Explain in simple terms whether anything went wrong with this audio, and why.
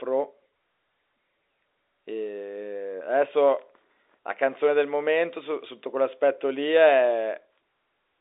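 Nothing went wrong: the speech simply carries the narrow, familiar sound of an ordinary landline call, because G.711 telephone coding keeps only the range from about 300 Hz up to roughly 3.7 kHz and lets nothing through above about 3.8 kHz.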